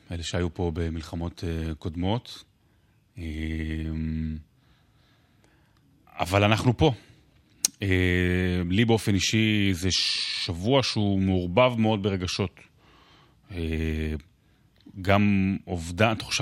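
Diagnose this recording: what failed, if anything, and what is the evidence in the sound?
Nothing failed here: listening across the whole recording, there's no stage of the chain that gives itself away, and the speech arrives without anything that needs explaining.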